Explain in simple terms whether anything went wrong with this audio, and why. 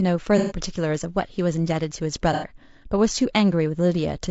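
Two problems can be heard in this speech. Throughout, the voice sounds rough and grainy, with a hiss that sits between the tones of the voice and a top end that sounds thin and somewhat artificial. This is likely low-delay AAC compression, the kind used for video calls. It cuts the sound into very short slices so the delay stays small, but those short slices capture the voice's pitch poorly, and at the data rate used here the detail that is lost is plainly audible.

There are also two brief dropouts, from 0.38 to 0.58 s and from 2.33 to 2.46 s. These are AAC frame loss with concealment. Small blocks of data never arrived, and the decoder filled each gap by reusing and reshaping the last good piece of sound. Because the gaps are short, the voice does not fall silent. Instead, it turns smeared and noisy for a moment before normal sound resumes.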